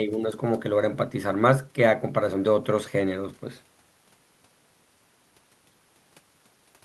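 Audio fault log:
No fault was found in this speech clip.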